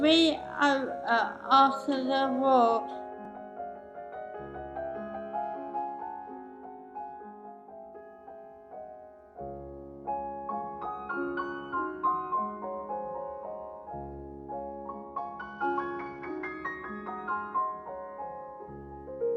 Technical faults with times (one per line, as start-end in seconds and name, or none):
5.43-7.93 Bluetooth SBC bit pool drop
15.03-16.53 Bluetooth SBC bit pool drop